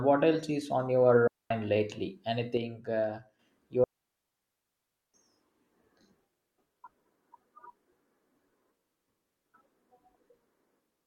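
Right after "what else is on", at 1.27 s, the speech cuts to near silence until 1.51 s, a digital wireless dropout of about 233 ms. The receiver has lost too much of the link's data and mutes with a very fast fade, so the gap is clean, with no crackle or noise burst at either edge. On a waveform it is a flat line with steep shoulders. On a spectrogram it is a vertical blank band across all frequencies.

From 2.57 to 3.39 s the speech suddenly sits about 6 dB lower, then jumps back up just as abruptly. The likely cause is one channel dropping out of a stereo pair, so the mono sum keeps only half of the shared signal. The waveform envelope shrinks by half in amplitude for that stretch with square edges. The spectrogram shows the same shapes, uniformly dimmer, with no change in tone.

A second, much longer digital wireless dropout runs from 3.84 to 5.14 s, a 1.3 s hole of near silence. It again starts and ends with a quick fade and no surrounding noise. 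It shows as a wide, empty full-band gap on the spectrogram and a long flat stretch in the waveform.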